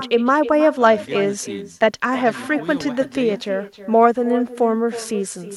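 From start to finish, every phrase is trailed roughly a third of a second later by a fainter, thinner copy, about 15 dB below the talker. This is echo with no canceller: the far end's loudspeaker feeds its microphone, and nothing subtracts it.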